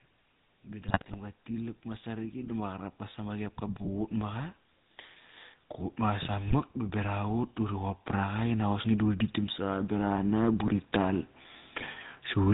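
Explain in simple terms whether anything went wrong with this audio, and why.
GSM full-rate codec, throughout the whole clip: the speech has passed through the original mobile-phone codec, and the damage is plain to hear. Rather than sending the sound itself, this codec sends a rough model of the vocal tract plus a simplified pulse pattern to drive it, and it discards everything above 4 kHz. The result is a muffled, buzzy, gravelly roughness over every word.

Automatic gain rising, from 0.66 to 4.58 s and again from 5.98 to 11.31 s: a gain control judged the input too quiet and slowly turned it up. Because it raises everything at once, the voice and the background noise swell together over several seconds. The second rise is slightly larger than the first, so the later part of the clip grows louder.

GSM bit errors, from 0.88 to 1.17 s, from 6.48 to 6.57 s, and from 11.80 to 11.87 s: a weak phone link corrupted some of the data before it reached the decoder. 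When the damaged values describe pitch, tone or loudness, the decoder rebuilds the wrong sound for a moment. In these brief stretches the speech breaks into squawks, pops and gargling, and the first burst lasts longest.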